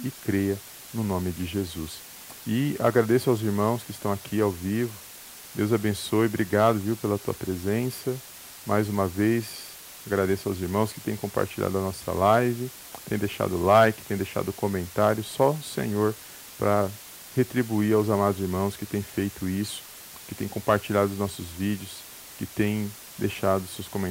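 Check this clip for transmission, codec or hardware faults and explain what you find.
One fault is present for the whole recording: low bit depth with dither. The speech appears to be stored at about 6 bits, and dither noise added before rounding turns the coarse quantisation error into a steady white hiss roughly 20 dB below the speech, with no grainy distortion. A spectrogram shows an even noise floor across all frequencies, and the waveform shows a constant fuzzy band through pauses.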